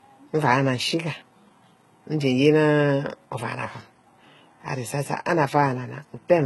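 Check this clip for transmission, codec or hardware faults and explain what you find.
One codec fault runs through the whole speech clip. The treble sounds synthetic and lispy, with nothing above 11.8 kHz. Heavy HE-AAC compression is the likely cause, at a very low bitrate, which fits roughly 16 kbps. Spectral band replication copies lower bands upward under a coarse envelope, so the rebuilt top end's harmonics misalign with the true signal, and s sounds turn gritty and metallic.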